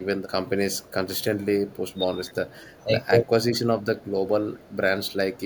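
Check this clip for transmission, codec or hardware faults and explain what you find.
One fault type turns up, in four short spots. Speech suppressed in double talk occurs at 0.25–0.35 s, 1.97–2.18 s, 2.42–2.46 s and 2.85–2.97 s. The likely cause is an echo canceller failing to separate the talker from overlapping loudspeaker echo and turning the talker down with it. The speech dips by a few decibels to about 10 dB, and by roughly 20 dB in the second, longest event.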